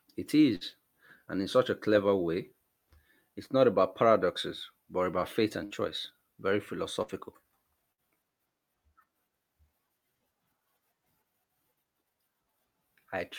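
At 0.55 to 0.64 s, 5.65 to 5.74 s, 7.03 to 7.11 s and 7.92 to 8.01 s, the speech briefly freezes into a fading buzz or hiss, then jumps ahead. Each burst of packet loss is concealed for roughly 55 ms, and 60 ms of speech never arrives.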